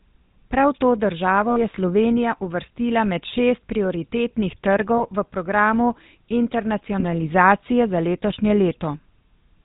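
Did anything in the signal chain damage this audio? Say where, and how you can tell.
Yes. Throughout, the speech has a buzzy, gravelly roughness, with nothing above 4 kHz. That points to the GSM full-rate codec, which fits 13 kbit/s. It models the vocal tract and drives it with a sparse, regularly spaced pulse excitation. The damage is plainly audible.

Brief rough, metallic rings hold the sound at 1.5 to 1.59 s, at 4.98 to 5.10 s between "uvrstila med šest prioritetnih" and "v programu", and at 7.0 to 7.03 s. These are lost GSM frames on the network path, concealed by repeating the last good frame's settings. The first gap fits about three 20 ms frames, the others one each.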